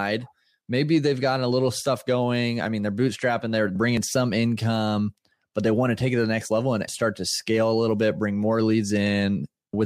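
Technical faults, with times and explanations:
3.88 to 3.97 s, compressed frames skipped: the speech jumps forward, losing about a tenth of a second of audio, because a few consecutive frames of the compressed stream never reach the output, either absent from the file or rejected by the decoder as corrupt. The gap is a whole number of frame lengths.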